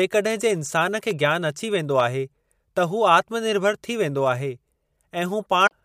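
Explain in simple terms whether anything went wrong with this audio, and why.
Two things went wrong in this speech clip.

The first is a loud pop, from 1.11 to 1.13 s. It is one short, sharp click, louder than the speech itself. The talking carries on underneath it. The likely cause is a sudden electrical jolt, from a plug, a switch or static. That jolt was added to the signal. The equipment after it smoothed the jolt into a brief thump.

The second is a broken MP3 bit reservoir, from 5.66 to 5.72 s. The sound briefly skips and glitches. MP3 files save space by letting each small slice of audio borrow storage from the slices before it. Here a few slices were likely lost. The next slice went looking for its borrowed data and found the wrong bytes. So the audio jumped ahead and glitched for about two slices, which fits slices of about 26 ms each.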